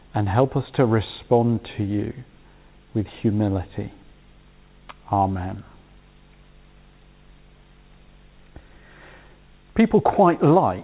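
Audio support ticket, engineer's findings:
No faults found. Call path limited to 4 kHz.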